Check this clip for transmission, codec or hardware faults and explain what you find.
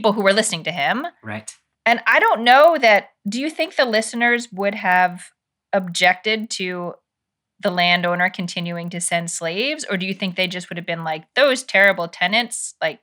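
One fault runs throughout: the resampler restarted on every block. Each 40 ms block was converted from 24 kHz to 48 kHz separately, leaving edge errors heard as a 25 Hz buzz that, unlike mains hum, vanishes in pauses.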